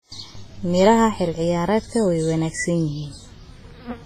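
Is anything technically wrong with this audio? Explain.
Yes. Throughout the speech, the audio carries heavy codec damage, with nothing above 15.4 kHz and a ringing, washy character, most likely from WMA compression at a low bitrate, which fits roughly 24 kbps. This transform codec quantises long blocks, so its noise smears across tens of milliseconds around each sound, and weak spectral lines are discarded outright. The result is a hiss that swells and breathes with the speech, smeared transients, and a hollow, watery texture in quieter detail.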